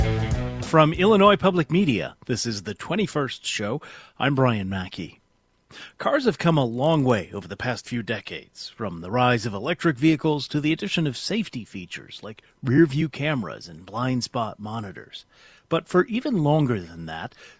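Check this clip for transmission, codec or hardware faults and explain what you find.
One fault is present. From 6.38 to 7.96 s, the resampler restarted on every block. Each 20 ms block was converted from 24 kHz to 16 kHz in isolation, so every boundary carries an error. The result is a 50 Hz buzz riding on the signal and vanishing in silence.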